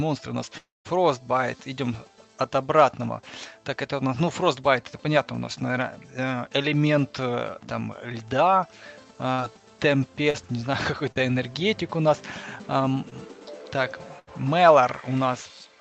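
From 0.57 to 0.87 s the sound continues as a fading buzz or hiss, then falls to about 0.18 s of silence before returning with roughly 0.28 s of material gone. This is likely a long network dropout, with the receiver extrapolating the last audio until it gave up.

At 9.33 to 9.40 s and again at 14.19 to 14.29 s, a burst of packet loss removes 60 ms and then 80 ms. Each gap is bridged by a held, decaying continuation of the preceding sound, and playback resumes further along without the missing portion.

Short concealed packet loss occurs at 10.30 to 10.36 s, 11.12 to 11.18 s and 13.10 to 13.13 s, covering about 40, 40 and 20 ms. The concealment fills each hole with a brief smear or wobble before blending back into the real signal. Throughout, the Opus call path limits the upper band to 8 kHz.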